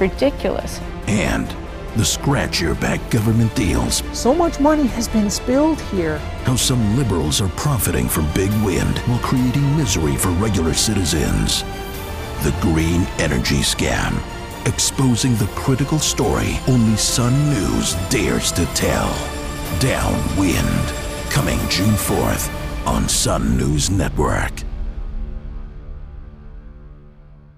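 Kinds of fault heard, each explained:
No faults turned up here, so there's nothing to list for this one.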